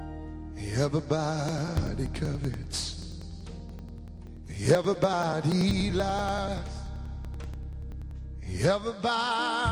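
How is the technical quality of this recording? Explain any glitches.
The recording is marred by periodic USB or driver dropouts. From 1.49 to 8.11 s, something blocks the USB bus or audio driver every 0.096 s, and a few milliseconds of audio are skipped each time. Around seventy evenly spaced ticks result, audible wherever sound is present.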